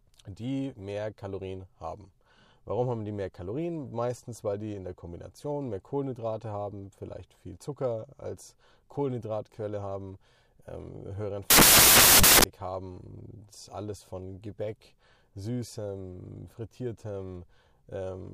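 From 11.50 to 12.44 s, nearly a second of the speech is replaced by a burst of loud, harsh broadband noise. This is samples built from the wrong bytes: for that stretch, each value was assembled with its bytes misaligned or in swapped order, so the rapidly fluctuating low-order bits landed in the most significant position and drove every sample toward random, large amplitude.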